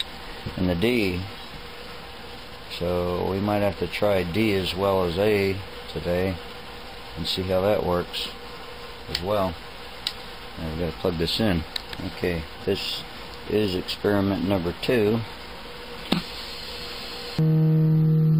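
Nothing technically wrong turns up anywhere in this audio, so there's nothing to flag.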